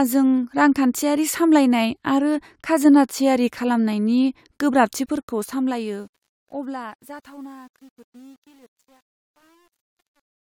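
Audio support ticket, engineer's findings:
Truncation distortion on the fade-out from 5.05 s to 10.59 s: speech goes gritty, worst 6.56 to 10.6 s. Fade or gain stage drops to about 9 bits with no dither, so the tail collapses into coarse square steps.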